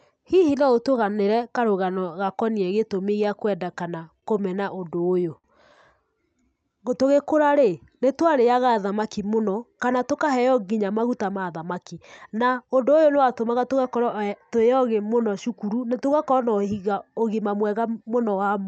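At 4.19 to 4.24 s there is a short stall from a late packet. One packet missed its playout slot, so the jitter buffer briefly ran dry and the receiver extended the last sound by about 30 ms. Nothing is lost, but that sound lingers too long, with a slight buzz or dip. Playback resumes 30 ms later than before.

Between 4.60 and 5.46 s repeated stalls produce a stutter. Packets kept arriving behind schedule, and the buffer emptied five times. Each gap was bridged by continuing the preceding sound, about 88 ms in total, with the longest fill at 61 ms and faded. About a tenth of that stretch is concealment, so the audio drags in small hitches.

From 6.20 to 8.81 s a jitter buffer slow-down stretches the speech to about 94% speed. To rebuild its reserve, the receiver repeated individual pitch periods and pause fragments, adding 165 ms. Pitch stays put, but sounds are drawn out.

From 10.72 to 12.35 s a jitter buffer speed-up runs the speech at about 109% speed. 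With excess audio queued, the receiver trimmed short pitch-period pieces, roughly 150 ms overall. The speech sounds hurried at unchanged pitch. Throughout, the Opus call path limits the audio to about 8 kHz, at a bitrate near 48 kbps.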